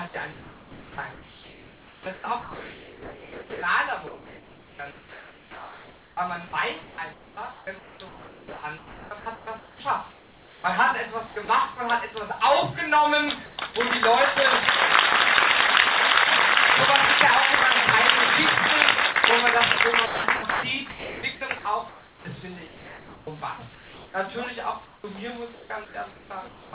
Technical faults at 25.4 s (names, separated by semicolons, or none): sound chopped by the voice detector